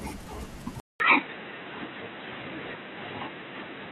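At 0.8 s the speech drops out for 200 ms, then returns dull and boxy through to the end, with nothing above 3.9 kHz, a modest level shift and faint new background noise. The likely cause is an input switched to a poorer device.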